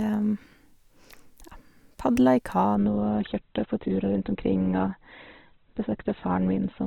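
Adaptive stream at a lower bitrate from 2.75 s, just after "padla i", to the end of this speech clip: without any gap, treble above 4.2 kHz vanishes and codec artefacts thicken, which fits the stream dropping from 64 kbit/s to 12 kbit/s Opus.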